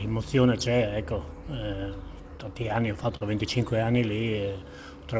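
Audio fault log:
2.38 to 3.23 s, repeated stalls (stutter): playback catches seven times, each pause filled by stretching the preceding sound for about 100 ms in all, so nothing is lost but roughly an eighth of this stretch is padding and the rhythm drags. The jitter buffer kept running dry as packets arrived late. On a spectrogram, already empty above 8 kHz from the wideband call codec, short smeared, repeated frames appear; the waveform shows brief held patches, the longest about 43 ms.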